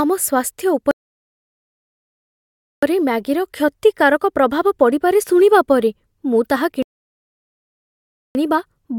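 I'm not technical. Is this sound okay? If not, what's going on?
No. There are two rebuffering stalls, from 0.91 to 2.83 s and from 6.83 to 8.35 s. In each, the speech stops and there is silence, because the player used up the audio it had downloaded and had to wait for more to arrive. When the speech comes back, it picks up exactly where it left off, so nothing is missing. The pauses just add about 1.9 and 1.5 seconds of dead air.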